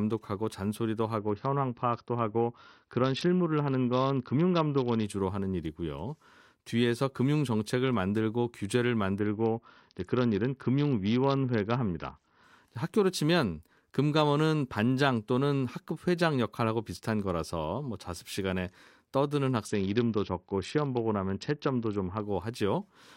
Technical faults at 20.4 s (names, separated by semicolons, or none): Bluetooth SBC bit pool drop